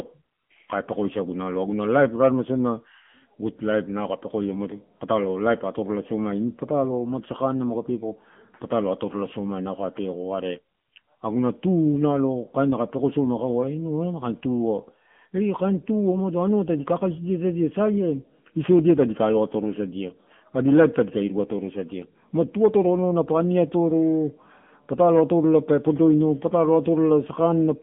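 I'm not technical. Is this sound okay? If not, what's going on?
No. The whole recording has passed through an AMR narrowband mobile codec, the compression used on older phone networks. Everything above about 3.6 kHz is gone, so the voice sounds boxed-in and muffled, and the heavy squeezing adds an audible buzzy, synthetic edge from start to finish.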